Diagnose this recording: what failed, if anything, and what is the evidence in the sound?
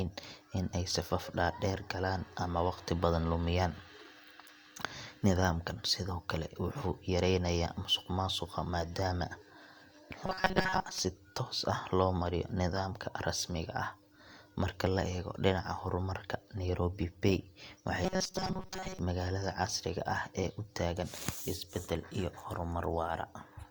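A rigid metallic buzz at 188 Hz appears in the speech from 10.26 to 11.01 s, before "toos ah loo mariyo", and from 18.04 to 18.99 s. This is robotic sound from repeated short buffers, likely a driver-stage underrun looping a roughly 5.3 ms chunk over most of the real audio.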